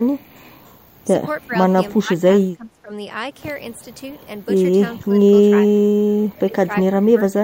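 The speech dips at 1.47 to 1.55 s, 1.96 to 2.92 s, 5.12 to 5.25 s, 5.65 to 5.98 s, and from 6.34 s to the end. This is speech suppressed in double talk, likely from an echo canceller mistaking it for echo. The drops run from about 10 dB to about 20 dB, deepest near 2 s.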